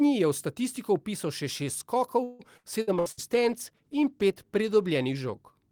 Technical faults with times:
2.23-3.20 repeated packet loss (robotic sound)
2.97-5.71 call bitrate drop

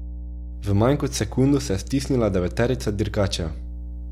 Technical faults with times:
0.00-4.12 mains hum

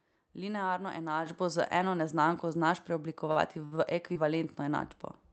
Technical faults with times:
1.26 microphone volume stepped up
2.28 microphone volume stepped up
3.31-4.24 repeated packet loss (robotic sound)

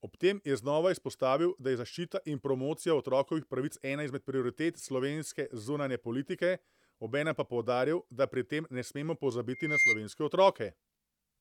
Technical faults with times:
9.52-10.04 loudspeaker feedback squeal

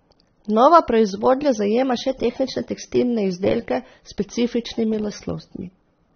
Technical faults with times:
0.00-6.15 AAC compression
1.84-2.97 drift correction step

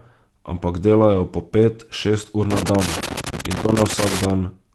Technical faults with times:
1.13-1.19 lost packet rebuilt from error correction
2.51-4.30 loose connector crackle

